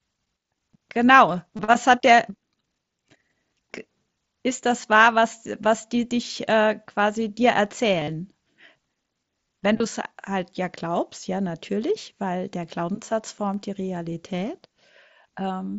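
Concealed Bluetooth headset packet loss at 1.56–1.59 s, 8.00–8.08 s and 9.78–9.80 s: the receiver patches lost packets with recent waveform, causing brief buzz, longest around 8.0 s. CD scratch ticks at 13.54–13.83 s: three ticks of uneven strength, each well under a millisecond, where unreadable disc data was interpolated or muted once per rotation.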